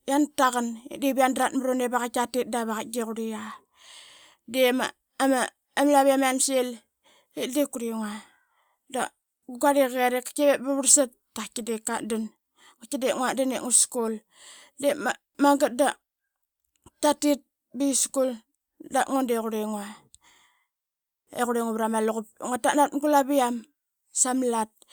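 A speech recording, and nothing in it is technically wrong.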